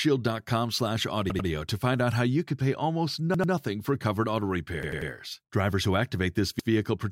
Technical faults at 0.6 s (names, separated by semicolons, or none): none